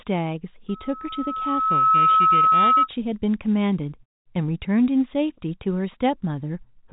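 A telephone-band speech recording, with nothing above about 3.8 kHz as G.711 coding leaves it, carries loudspeaker feedback squeal from 0.68 to 2.88 s. A 1.3 kHz tone swells over roughly a second and a half until it sits about 10 dB above the speech. The microphone is picking up the loudspeaker it feeds, and the loop gain at that frequency exceeds one, so the tone keeps building until the loop is broken.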